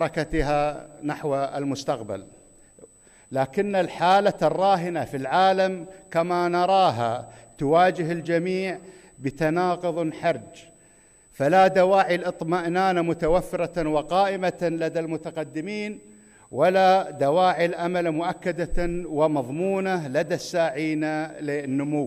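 A USB whine sits under the sound for the whole clip. It is a thin, steady tone of fixed pitch at 8 kHz. Its strongest component is the harmonic at 16 kHz. The level is roughly 30 dB below the signal. The cause is the USB bus drawing current in 125-microsecond microframes. That periodic load leaks into the audio through the shared power or ground. The result is a constant high whistle that never changes pitch.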